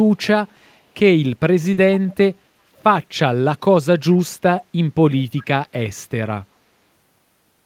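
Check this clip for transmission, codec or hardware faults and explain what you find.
Two faults stand out: one short concealed packet loss and a recurring echo leak.

At 1.73 to 1.79 s, a short concealed packet loss replaces 40 ms with a synthesised continuation of the preceding sound, giving a brief smear or wobble. Unlike a plain dropout, there is no silent gap, just a momentary unnatural sameness before real audio resumes.

At 2.08 to 2.14 s, 4.6 to 4.65 s and 5.37 to 5.44 s, an echo leak brings back faint scraps of the speech 387 ms late, quietest at the first and last and somewhat louder at 4.6 s. This is likely a far-end loudspeaker whose echo canceller let residue through. The fixed long delay and clipped fragments distinguish it from room reverberation, which trails continuously.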